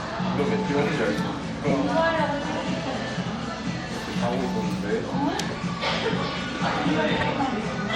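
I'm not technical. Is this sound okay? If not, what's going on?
No. There are repeated frames at 1.69 s and from 7.20 to 7.25 s. A tiny chunk of the recording was stored twice, so it plays again, heard as a brief stutter: about 26 ms the first time, about 52 ms the second.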